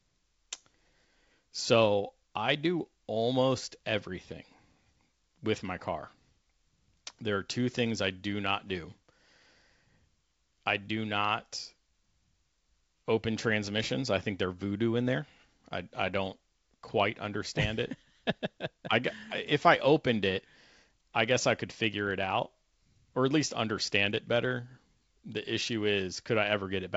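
No technical faults can be heard in this speech, which carries the band-limited sound of G.722 wideband telephone coding at 64 kbit/s, with nothing above 7.7 kHz.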